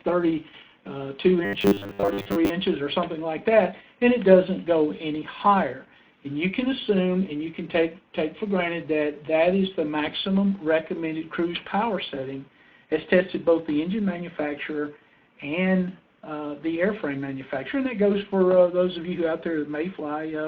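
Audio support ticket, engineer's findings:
Robotic sound from repeated short buffers, 1.45 to 2.50 s. Rigid, metallic 100 Hz buzz; roughly 70% of that stretch is repeated material. Likely buffer underrun: last block, which fits a 10 ms buffer, looped while new audio is skipped.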